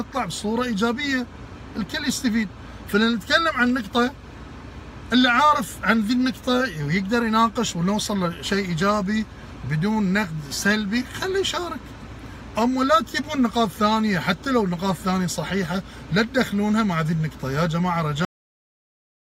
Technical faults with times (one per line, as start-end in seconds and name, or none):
18.25-19.36 cut-off end